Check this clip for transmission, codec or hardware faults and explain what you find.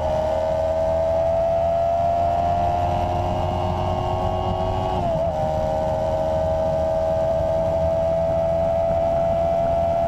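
Two short stretches of frames out of order, at 5.95 to 6.14 s and 7.30 to 7.50 s. In each, two adjacent blocks of about 93 ms, which fits runs of four frames, were decoded in swapped order, so the later block plays before the earlier one and nothing is lost. It sounds like a brief garbled flutter. A waveform or spectrogram shows abrupt discontinuities at the three joins and content that jumps out of sequence.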